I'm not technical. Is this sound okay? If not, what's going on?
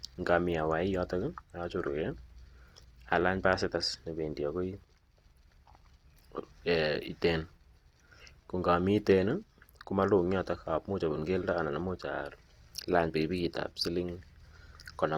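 No. Opus compression damage runs through the whole clip, from start to finish, and it is plainly audible. The speech keeps its full brightness, reaching up to about 20 kHz, but it sounds grainy, rough and noisy rather than clean. This is likely due to squeezing the audio into a small file: when there isn't enough data to describe every detail, the encoder fills the gaps with copied or noise-like sound, which creates that gritty texture.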